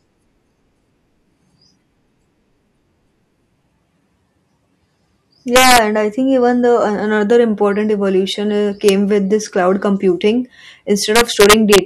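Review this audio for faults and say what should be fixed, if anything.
Integer overflow cracks the speech at 5.56 to 5.78 s, 8.89 s and 11.16 to 11.78 s, where peaks exceeded the integer range by about 5 dB, 1 dB and 4 dB and wrapped to the opposite sign instead of clamping. Saturating arithmetic or headroom before conversion would prevent this.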